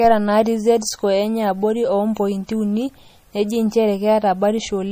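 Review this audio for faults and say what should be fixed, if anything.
Throughout the speech, the treble stops dead at 15.3 kHz, and plainly audible swirly, watery artefacts ride on the s sounds, with smeared attacks. This is most likely MP3 compression at a low bitrate, consistent with roughly 40 kbps. The encoder runs short of bits, so it drops everything above a fixed frequency and zeroes weak spectral lines that flicker on and off between frames. A plain low-pass filter would dull the top end cleanly without that metallic, chirping flutter. To prevent it, keep the original uncompressed file or encode at a much higher bitrate.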